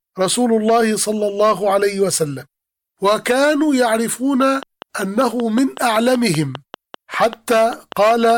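A speech recording with a train of clicks from 4.42 s to 8.31 s. Sharp, closely matched ticks arrive at a steady 5.16 per second, about twenty in all. They rise a few decibels above the speech and stay audible in the pauses. Interference from nearby equipment is the likely source.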